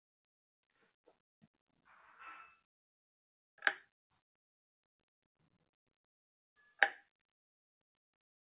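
Right from the start there's a speech-tuned noise suppressor applied to music or sounds. It keeps treating the steady parts as noise, so the level breathes by a few decibels throughout, with held material and tails dipping while sharper onsets get through. Everything above about 4 kHz is missing, which fits a G.711 mu-law call path.

Between 1.07 and 1.87 s you get sound cut by the noise suppressor. For roughly a third of a second within that stretch, the suppressor clamps down, pulling the level as much as about 18 dB, so the sound sinks and its decay is chopped short. It happens again, harder, from 3.86 to 6.12 s, with up to about 20 dB of cut over around a second and a half, so the fading parts sink.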